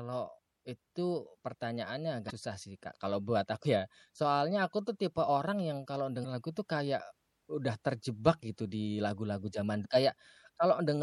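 The whole speech track carries plainly audible MP3 compression, likely at a low rate, around 64 kbps. The encoder drops the treble and lets weak frequency detail flicker between frames, giving a watery, swirly texture and smeared consonants that persist steadily, unlike a passing glitch.

Damaged data in a compressed stream breaks through at 2.26 to 2.31 s, 6.21 to 6.25 s and 9.81 to 9.86 s. Corrupt bytes make the decoder misread frames and resynchronise, producing a brief chirp, squawk, click or short hole, each about 45 ms, sharper and more local than the constant compression smear.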